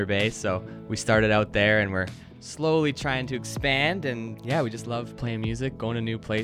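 At 2.92 s there is a block of digital silence. The sound drops straight to silence for about 1.33 ms and then returns, with no fade on either side. That length fits a 64-sample buffer that the program failed to fill in time. The gap is far too short to hear as a hole. Instead, it comes across as a tick or a brief dip.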